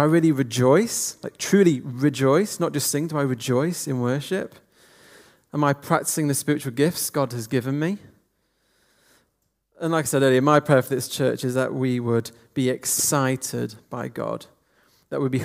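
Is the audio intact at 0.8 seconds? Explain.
Yes, at 0.8 seconds the audio is intact, with no dropout, click, distortion or other fault to be heard at that point.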